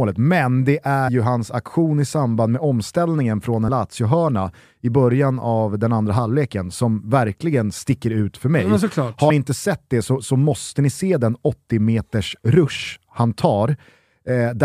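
A small forward jump in the speech occurs at 1.07 s, between "men det" and "hans aktion i samband", and at 3.67 s, after "samband med omställningen från". These are compressed frames skipped: each loses around 70 ms, which fits about three missing 23.2 ms frames.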